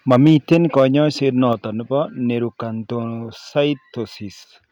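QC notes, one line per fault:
0.10–0.85 s, microphone overload: the loudest syllables come out harsh and crackly, with peaks about 5 dB over the converter's ceiling. Likely the input gain was set too high, so a small fraction of samples got flattened.
0.54 s and 1.53 s, microphone volume stepped down: voice and background drop abruptly, by about 2 dB and then about 4 dB, as the call software likely cut the mic input.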